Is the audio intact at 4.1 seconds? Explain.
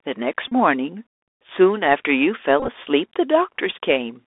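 No, at 4.1 seconds the Bluetooth CVSD headset codec is present, as throughout: one-bit delta coding, consistent with 64 kbps, confines speech to roughly 300 Hz–3.6 kHz, adding granular hiss and scratchy s sounds.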